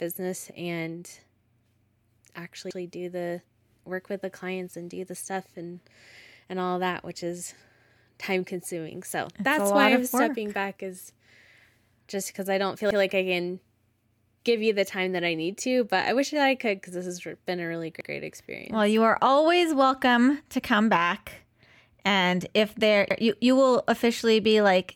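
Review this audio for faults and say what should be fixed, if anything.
Overlapping chunks: each 5-second chunk starts 100 ms before the previous one ends, so that slice repeats, stuttering at 2.71, 7.81, 12.91, 18.01 and 23.11 s. To prevent it, start each chunk exactly where the last one stopped, or trim the overlap before joining the chunks.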